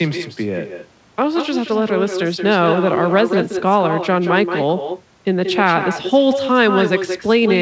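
From start to finish the speech carries an echo with no canceller: the far end's loudspeaker feeds its microphone, and the return arrives around a fifth of a second late, about 6 dB down, as a thinner shadow. A spectrogram shows each syllable's energy repeated just after it, and the waveform shows fainter duplicate envelopes trailing every burst. Through the wideband call path, which fits G.722, everything stops cleanly at 8 kHz.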